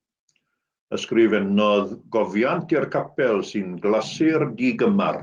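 Nothing is technically wrong with this speech clip, and its Opus voice compression at 24 kbps is working as intended.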